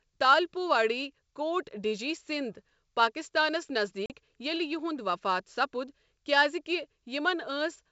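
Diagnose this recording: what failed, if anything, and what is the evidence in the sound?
Network stage, packet loss on an ADPCM call: right after "کوٹ ڈِجی سِندھ پٲکستانس" the speech drops into a hard-edged silent hole from 4.06 to 4.11 s. About 40 ms is missing, which points to a couple of lost packets. Zero-filling the gap leaves the receiver's adaptive predictor and step size out of step with the sender's. The speech resumes with a slight distortion that settles within tens of milliseconds. That recovery tail marks it as ADPCM state loss rather than a plain dropout or edit. The 64 kbit/s G.722 wideband coding around it keeps clear speech up to 7 kHz.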